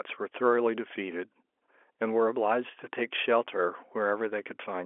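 No technical faults can be heard anywhere in the speech.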